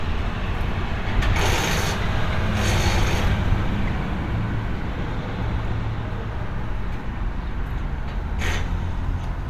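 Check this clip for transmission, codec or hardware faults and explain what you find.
Nothing stood out on listening to this recording of sounds.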